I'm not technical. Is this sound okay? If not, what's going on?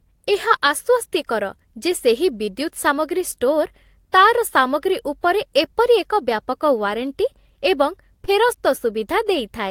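No. Short concealed packet loss occurs at 2.45 s, just after "ଯେ ସେହି", and again at 8.25 s. Each time, about 20 ms of the call arrived too late, and the receiver patched each gap with a brief, smeared continuation.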